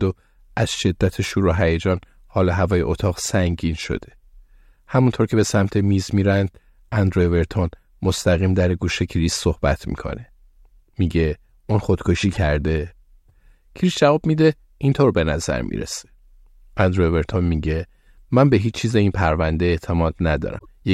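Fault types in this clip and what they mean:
Damaged data in a compressed stream: corrupted bytes make the decoder lose frame sync, giving brief glitches at 12.33–12.37 s and 20.55–20.65 s.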